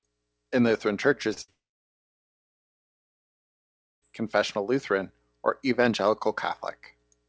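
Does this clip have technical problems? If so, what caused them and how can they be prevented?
Yes. There are three network faults, all in a call path whose wideband codec leaves nothing above 8 kHz.

Short concealed packet loss, 1.34 to 1.38 s: about 20 ms of audio never arrived in time. The decoder extended the preceding sound for about 25 ms and then blended back, leaving a brief smear. Prevention: add forward error correction or a slightly deeper jitter buffer.

Burst of packet loss, 1.42 to 1.50 s: consecutive packets were lost, about 60 ms in total. Concealment held the last sound for about 55 ms while fading it, producing a short buzz or hiss before the audio resumed further along. Prevention: use redundancy or FEC sized for multi-packet bursts, and reduce congestion on the link.

Long network dropout, 1.50 to 4.04 s: a brief fading continuation gives way to about 2.4 s of silence, and about 2.5 s of audio is gone when sound returns. 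The likely cause is a complete interruption of packet delivery. Prevention: stabilise the connection with a wired link or better Wi-Fi, and monitor for route or network handovers.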